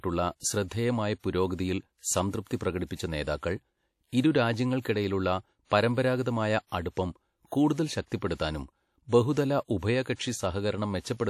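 Speech throughout carries plainly audible WMA compression artefacts, likely from a bitrate around 48 kbps: ringing, washy smearing and breathing hiss, with a spectrogram showing a hard ceiling at 16.6 kHz and patchy gaps.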